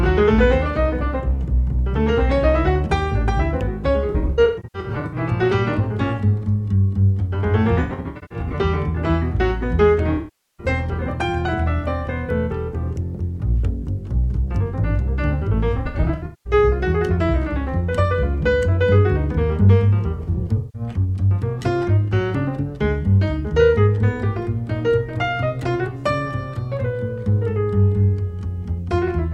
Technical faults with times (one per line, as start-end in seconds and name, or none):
4.10-5.16 AAC frame loss with concealment
7.81-8.53 AAC frame loss with concealment
10.16-10.66 AAC frame loss with concealment
15.77-16.53 AAC frame loss with concealment
20.14-20.82 AAC frame loss with concealment